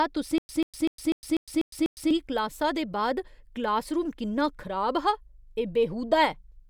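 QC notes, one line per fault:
0.38–2.11 s, stutter with silent gaps: a 138 ms fragment of speech replays seven times, each followed by about 109 ms of digital silence, a steady 247 ms cycle, before "क्लासा दे बाद क्लासरूम". This is likely a stalled stream re-serving its last buffer, so the intended audio is lost.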